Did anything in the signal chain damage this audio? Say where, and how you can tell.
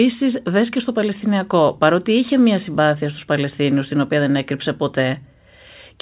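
No, nothing in the chain damaged it; the speech went through a WebRTC call path whose band limit, with nothing above 4 kHz, fits a 64 kbps G.711 A-law codec working as designed.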